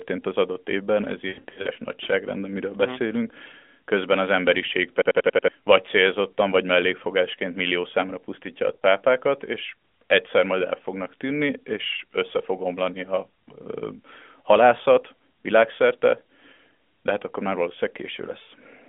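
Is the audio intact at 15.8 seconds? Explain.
Yes, the audio is intact at 15.8 seconds: nothing there breaks beyond the narrow, band-limited sound of the AMR narrowband mobile codec path that carries the whole clip.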